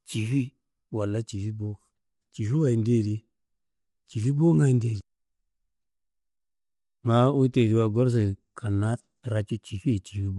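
Low-delay AAC compression, throughout: short frames smear the harmonics, leaving grainy noise between them and nothing above 11.6 kHz, likely AAC-ELD near 32 kbps.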